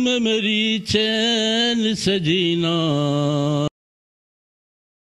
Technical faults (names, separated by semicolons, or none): cut-off end